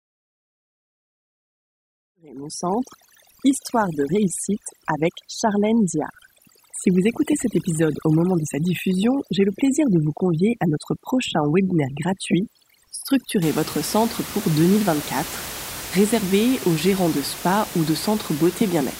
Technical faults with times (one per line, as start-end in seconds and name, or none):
0.00-13.42 overdone noise removal